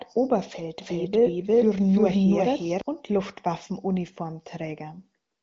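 From 0.81 to 2.81 s the speech is heard twice, a second copy at about equal loudness trailing the first by roughly 0.4 s, dry and abruptly cut in and out. This doubled audio track likely comes from the same signal being captured again through a slower path.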